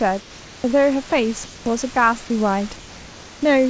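From 0.20 to 0.64 s, and again from 1.44 to 1.66 s, the room background, sitting about 23 dB below the loudest speech, turns into a smooth, featureless hiss about 1 to 2 dB quieter. This is likely comfort noise in place of the background: the sender stopped transmitting during the pause, and the receiver filled the gap with synthetic noise.

At 1.10–1.12 s and 1.94–1.96 s, a sliver of sound about 10 ms long vanishes into that same flat noise. This is likely sound dropped by the voice detector, which mistook the sound for background and briefly cut transmission.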